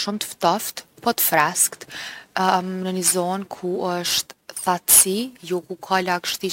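From 1.73 s to the end, the speech carries crude rate conversion. Samples were dropped with no filtering, in a pattern that fits 48 kHz to 44.1 kHz. The resulting error sits only about 10 dB below the speech. It adds a gritty, inharmonic fizz tracking loud and bright sounds.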